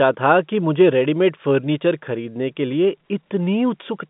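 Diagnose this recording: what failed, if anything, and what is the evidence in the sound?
Nothing has failed: the speech comes over a G.711 A-law telephone path at 64 kbps, with the line band running from roughly 150 Hz to 3.6 kHz, nothing above about 3.8 kHz, and at most a faint level-following quantisation hiss from the codec.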